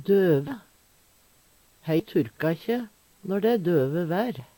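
At 0.47 to 0.52 s, and again at 2.0 s, compressed frames are skipped: the decoder drops whole frames, so the audio jumps forward, by about three frames (roughly 70 ms) first and about ten (roughly 200 ms) second, consistent with 20 ms frames. A waveform shows an abrupt change in envelope, and a spectrogram shows a discontinuity.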